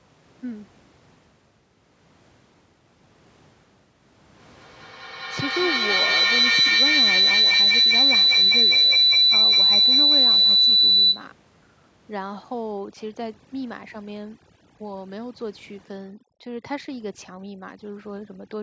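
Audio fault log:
4.39–11.35 s, feedback howl: a microphone-to-loudspeaker loop gained level on each trip, so repeats grew rather than faded and narrowed to a tone around 4 kHz, pulsing roughly every fifth of a second and peaking about 14 dB above the speech.
12.72–18.62 s, overdone noise removal: noise reduction set too strong switched frequency bands far down whenever they resembled its noise estimate, so the faint room noise drops to near silence with twinkling specks, and quieter parts of the voice vanish.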